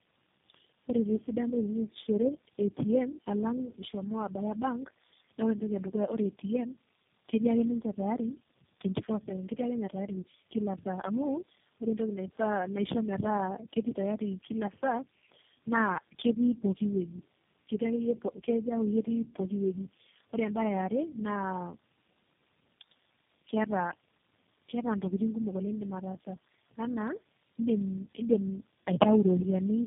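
From start to finish, the speech has the sound of tandem speech coding: it's been squeezed through low-rate speech codecs and rebuilt several times, each coder working on the previous one's mangled output. The artefacts stack up into a rough, muffled, warbly quality, worse than any single coding pass would give, and it points to about four coders in a row, something like AMR, G.729 and GSM full rate joined by ordinary telephone links. Nothing comes through above 3.6 kHz.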